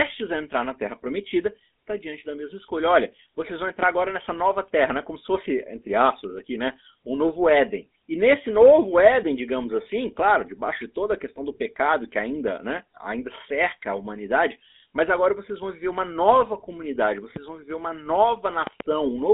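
Speech, carried through the GSM full-rate codec throughout. The sound is buzzy and gravelly, which fits the 13 kbps rate. The codec rebuilds the vocal tract from sparse pulse excitation. The line band runs 200 Hz to 3.7 kHz, and nothing passes above 3.8 kHz. A loud pop lands at 3.83 to 3.85 s and another at 17.36 to 17.39 s. A double pop follows at 18.67 to 18.83 s. Each peaks around 15 dB above the speech. The cause is likely a sudden voltage step from a plug, switch or static discharge.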